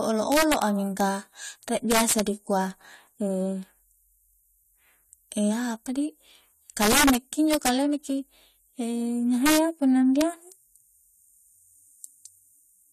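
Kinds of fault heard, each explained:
Integer overflow: at 0.32–0.62 s, 1.00 s, 1.91–2.20 s, 6.82–7.16 s, 7.53–7.69 s, 9.46–9.58 s and 10.21 s, loud speech peaks push the sample values past the largest number the format can hold. Instead of being limited at full scale, they wrap around to the opposite extreme, so each overshoot becomes a full-range jump. The result is harsh, violent cracks, far sharper than clipping. They are worst at 1.91 s and 6.82 s, where the level overshoots by about 6–7 dB.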